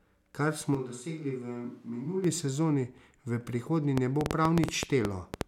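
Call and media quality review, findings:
Switch to a distant microphone, 0.75 to 2.24 s: speech abruptly turns roomy and hollow with thinner bass, level down about 5 dB, room noise rising to about 35 dB below speech. Likely close-mic signal dropped, with a camera or far mic taking over, then abrupt return.

Train of clicks, 3.98 to 5.42 s: about ten sharp, similar pops at roughly 7.7 per second, irregularly spaced, peaking around 20 dB above the signal and audible in pauses too. Likely pulse injection from nearby equipment interference or a faulty connection or power supply.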